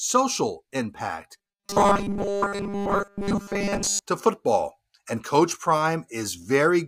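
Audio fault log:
1.38–4.03 s, robotic sound from repeated short buffers: new audio likely arrived too seldom, so a 5 ms fragment was replayed over and over in place of most of the real signal, forcing a rigid, metallic 200 Hz buzz onto the speech that only loosely follows its contours.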